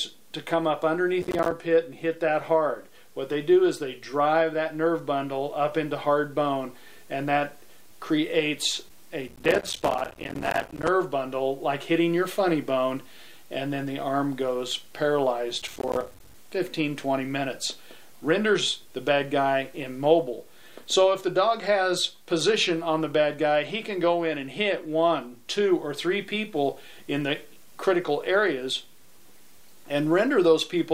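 A burst of gritty crackle tears through the sound from 1.22 to 1.52 s, again for the longest stretch from 9.28 to 10.88 s, and once more from 15.62 to 16.34 s. This is processor overload crackle: the processor repeatedly failed to finish its small audio buffers in time, and each missed deadline left a hard-edged gap of silence. The rapid train of gaps fits buffers of around 5 ms, and the tearing stops each time the load eases.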